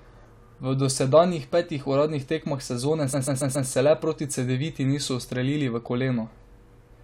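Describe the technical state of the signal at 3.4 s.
A stutter repeats a short 0.14 s block four extra times from 3.12 to 3.68 s, after "petih uradnih tekmah sezone": repeated frames, adding 0.56 s.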